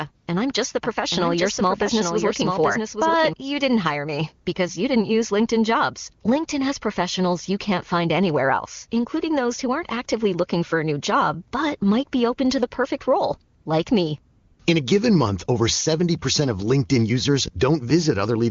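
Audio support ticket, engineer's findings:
AMR comfort noise. 0.15 to 0.27 s, just before "and I'm just": real background replaced by smooth, steady hiss for 120 ms. 13.59 to 13.65 s, between "to the perfect role" and "like me": 60 ms gap filled the same way. 14.37 to 14.59 s: 220 ms of synthetic noise. The phone judged the line silent and stopped sending speech frames. The receiver filled the gaps with generated noise of matching level and shape.

Doubled audio track. 0.83 to 3.33 s, ending before "you didn't hire me": a second full-band copy of the speech runs about 0.7 s behind, about 5 dB quieter. It has no reverb tail or room colour. It cuts in and out abruptly. This is likely a second capture path or an edit holding two offset copies. The AMR-WB HD Voice path underneath is clean at 23.85 kbit/s.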